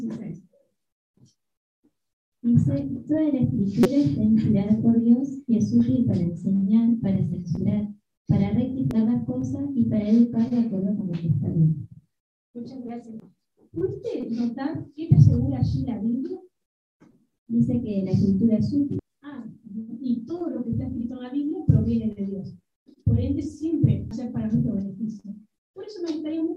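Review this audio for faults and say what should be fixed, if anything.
Brief chirps or blips at 3.83 to 3.86 s, 8.91 s, 13.20 s, 18.99 s and 24.11 s are damaged data in a compressed stream. Corrupted bytes make the decoder misread frames and lose sync until it finds the next valid frame header.

To prevent this, transfer and store the file with checksum verification or error-checked delivery so that corrupted bytes are caught and replaced before decoding.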